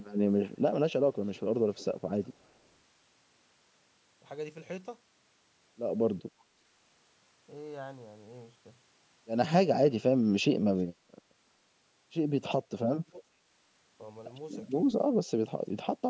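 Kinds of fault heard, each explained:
Echo leak: an echo canceller likely let loudspeaker pickup through, so faint copies of the speech return about 0.36 s late, about 25 to 40 dB down.
Speech suppressed in double talk: during overlapping talk, the canceller likely treated the talker as echo, dipping the speech by up to about 25 dB around 12.6 to 13.5 s.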